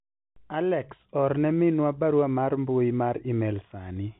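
No technical faults can be heard in this speech.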